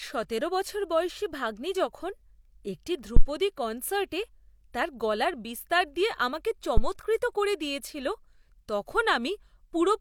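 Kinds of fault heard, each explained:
Phantom power thump: a supply step passes the coupling capacitors, giving deep thumps seen as low-frequency waveform swings decaying within 20 and 39 ms.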